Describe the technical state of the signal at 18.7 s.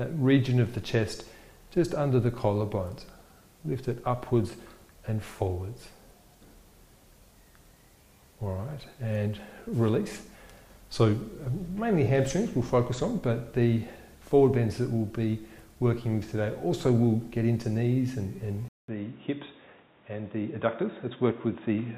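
At 18.68 s the sound drops out for 200 ms. It then returns dull and boxy, with nothing above 3.8 kHz, and holds that way to the end at 21.97 s. The input was likely switched to a poorer device. Level stays about the same. A new, faint background noise sits roughly 35 dB down.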